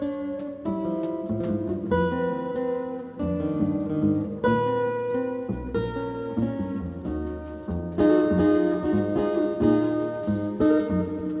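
No technical faults are audible.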